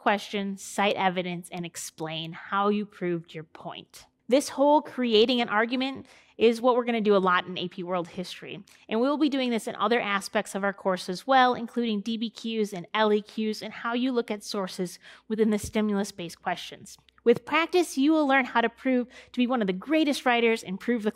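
No technical faults can be heard anywhere in this clip.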